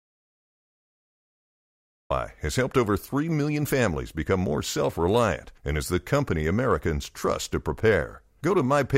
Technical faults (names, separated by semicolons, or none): audio dropout to silence